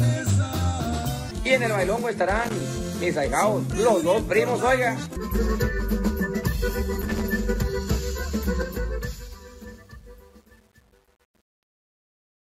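Irregular bursts of scratchy crackle break through from 2.36 to 2.60 s and again from 7.02 to 7.21 s. This is loose connector crackle: a worn or dirty contact keeps making and breaking, chopping the signal into brief dropouts.

From about 8.6 s the sound fades out to 12.5 s. From 8.58 s it turns gritty, and from 9.3 s to the end the grit is at its worst. This is truncation distortion on a fade. The fade stage keeps too few bits, which fits roughly 9-bit resolution, and adds no dither, so the quiet tail collapses into coarse square steps.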